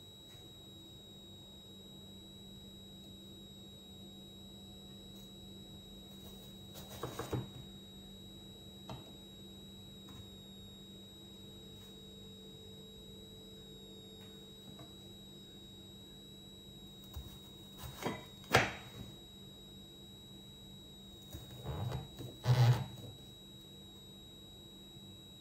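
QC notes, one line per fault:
Throughout: switching supply whistle. A thin, high whistle sits under the sound for the whole clip, wandering between about 3.77 and 3.87 kHz, roughly 4 kHz. It sits about 15 dB below the programme. A switching power supply is running its converter at an audible rate, in burst mode or beating against another supply. As its load shifts, the switching rate moves, so the pitch drifts rather than holding steady.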